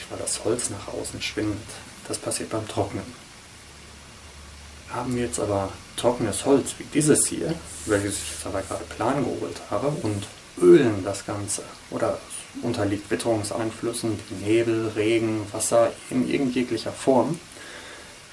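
Nothing stood out on listening to this recording.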